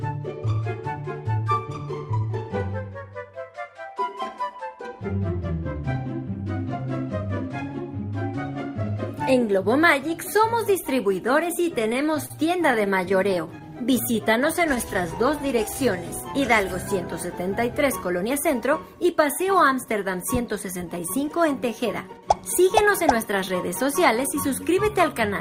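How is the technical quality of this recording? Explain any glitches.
The recording has a rough patch in the middle, roughly from 12 to 22 seconds, where the network delivery clearly struggled and the receiver's jitter handling keeps kicking in.

First come two bursts of repeated stalls (stutter). From 11.83 to 12.32 s there are five little hold-ups adding up to 69 ms, the longest about 39 ms. From 12.72 to 13.62 s there are eight more, 85 ms in total, none longer than 14 ms. Packets were turning up late, the buffer kept running dry, and each time the receiver stretched the last bit of sound to bridge the wait. Nothing actually goes missing, but the audio catches and drags in those spots.

Right after that, from 13.69 to 16.3 s, you get a jitter buffer slow-down. To build up a reserve, the receiver padded things out by repeating single pitch periods and slivers of quiet, adding 187 ms in all. 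Playback runs at about 93% speed with the pitch unchanged, so sounds feel slightly drawn out.

Overlapping that, between 14.17 and 14.78 s, there are scattered short gaps: around seven isolated lost or late packets, about 40 ms concealed in total, none much beyond 10 ms. Each hole got patched by continuing the previous sound, so what you hear are small ticks and smeary hiccups rather than dropouts.

Finally, from 18.11 to 21.76 s, there's a jitter buffer speed-up. The buffer was holding more than it wanted, so the receiver trimmed out short pitch-period chunks, roughly 200 ms' worth. The audio runs at about 106% speed at the same pitch and comes across as a bit hurried.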